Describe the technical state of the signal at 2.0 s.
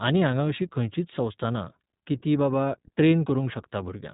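At 2.0 s, as throughout, iLBC codec passes nothing above 3.8 kHz, and independently coded 20 ms frames add synthetic roughness band-limiting alone lacks.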